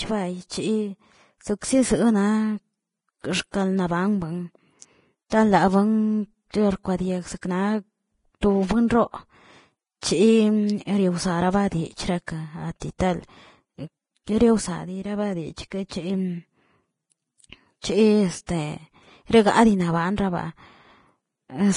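Heavy lossy coding, likely Vorbis compression, runs through the whole recording. The encoder has discarded everything above 10.6 kHz and quantised the remaining upper band so coarsely that its fine detail turns into noise of similar energy. The speech therefore sounds dull at the top yet hissy and grainy, with roughened tones and softened consonant onsets, damage that points to a low bitrate somewhere around 29 kbps.

Pre-echo occurs three times, at 5.30 to 5.32 s, 6.51 to 6.54 s and 17.81 to 17.84 s. In each case a sharp onset lands late in a transform block, and the quantisation noise sized for that loud moment spreads back across the quiet stretch before it, by about 21, 29 and 27 ms respectively. Each attack is preceded by a brief burst of hiss and arrives smeared rather than crisp.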